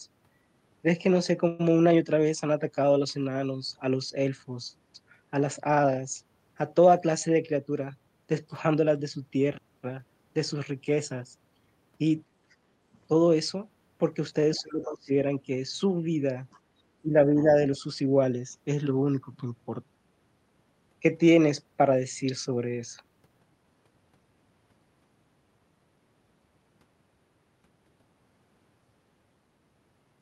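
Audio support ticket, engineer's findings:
Call audio freeze, 1.47–1.61 s: speech stalls and the last sound is stretched into a fading buzz for about 0.12 s, then resumes where it stopped with nothing lost. Likely delayed packets draining the jitter buffer. Playout delay grows by 119 ms.

Other side's voice leaking through, at 12.50 s (50 ms), 14.84–14.94 s and 16.52–16.60 s: faint foreign-voice scraps, very low level. The first is around 40 dB below the speech, the later two around 35 dB below. Likely residual loudspeaker echo missed by the echo canceller.

Short concealed packet loss, 14.29–14.33 s: brief smear in the speech. 40 ms of audio never arrived. The receiver filled 17 ms by extending the preceding sound and blending back, so the stretch runs about 20 ms shorter than the original.

Speech suppressed in double talk, 14.58–15.11 s and 17.02–17.53 s: the near-side speech dips while the far side is active. 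The first dip reaches roughly 20 dB and the second roughly 10 dB. Likely the echo canceller attenuating both talkers because it could not separate them.

Background gated by the echo canceller, 16.65–16.74 s: room tone drops by about 10 dB for roughly 0.1 s after the 16.5 s echo leak, then returns. Canceller clamping the microphone while the loudspeaker is playing.

Jitter buffer speed-up, 23.03–23.65 s: speech runs at 112% speed with the pitch unchanged and sounds hurried. The receiver cut repeated pitch-period slices, about 70 ms in total, to bring the buffer back down to its target delay.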